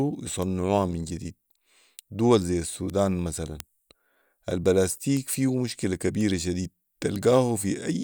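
Bit error spikes tick at 0.42 s, just before "من جديد", then at 2.90 and 3.60 s. More follow at 5.17 s, before "فيه مشكله", at 6.21 s, just after "فيه مشكله", and at 7.16 s. Each is one flipped bit. A sample jumps by a power of two, then snaps back. Each is heard as a sharp broadband tick, unrelated to the speech. The loudest, at 3.60 s, peaks near about -6 dBFS.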